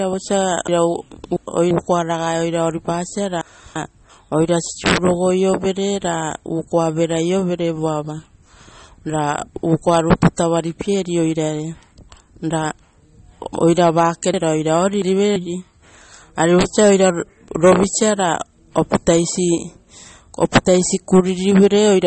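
Throughout this speech recording the sound is watery and swirly, with chirpy, metallic sibilants, smeared onsets, and nothing above 8.4 kHz. This is likely MP3 compression at a low bitrate, around 32 kbps, where the encoder cuts the treble and lets weak frequency lines flicker between frames. Three garbled jumbles occur from 0.68 to 1.71 s, from 3.41 to 4.10 s, and from 14.34 to 15.36 s, just after "oira vake". These are chunks out of order: segments of about 341 ms play one or two chunks late, leaving hard joins.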